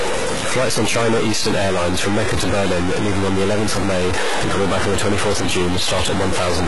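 A noisy distortion runs through the whole speech clip, and the pauses, instead of falling silent, fill with a steady hiss of noise. This is most likely a stuck bit, one data bit held fixed so that about half the samples land off by that bit's weight.

Across the same span the treble sounds false, with s sounds turning gritty and lispy, and nothing above 11.4 kHz. That points to heavy HE-AAC compression, likely near 12 kbps, rebuilding the top from copied lower bands that don't line up.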